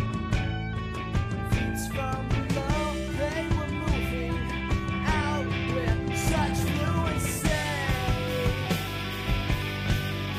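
No technical faults are audible anywhere in the clip.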